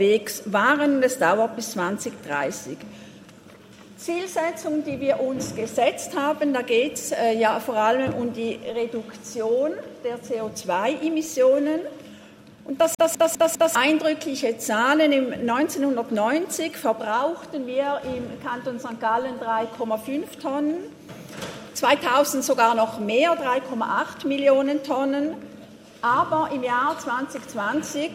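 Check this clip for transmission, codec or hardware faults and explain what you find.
One fault appears: from 12.95 to 13.75 s, a CD stuck on one turn. A scratch throws the laser back a track, so the same 0.2 s fragment repeats four times, each repeat starting after a brief mute. Its exact, evenly timed repeats separate it from network packet loss.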